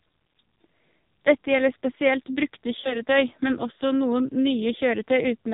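Throughout, the speech carries heavy AMR narrowband mobile codec damage. Nothing passes above 4 kHz. The voice sounds buzzy and synthetic, which fits a 5.9 kbps mode.

At 2.80 to 3.01 s, after "gjelder spesielt brukte", lost AMR speech frames occur. The decoder reuses old settings with falling gain. A brief dip or warble results, fitting roughly 40 ms lost.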